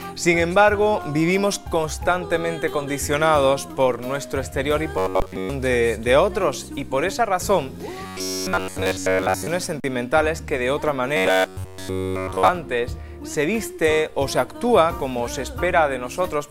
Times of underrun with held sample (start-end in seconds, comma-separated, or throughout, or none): 5.20, 9.80-9.84